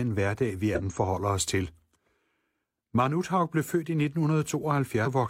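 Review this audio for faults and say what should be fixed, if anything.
Damaged data in a compressed stream appears twice, from 0.75 to 0.80 s, between "hverdag vi" and "forholder os til", and from 5.02 to 5.08 s, each lasting about 60 ms. Corrupted bytes in the coded speech leave the decoder unable to read those frames, so it loses sync and searches for the next valid frame header. Both events should be fixed by re-sourcing the file from an intact copy. Prevent recurrence by verifying checksums after every transfer or storage step.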